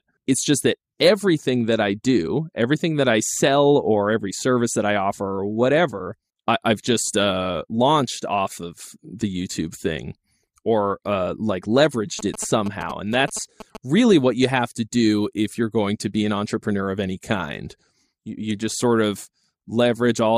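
Speech clip with GSM signalling bursts from 12.19 to 13.77 s: a galloping ticking buzz around 217 Hz, about 10 dB under the voice, from a nearby 2G phone's radio bursts getting rectified.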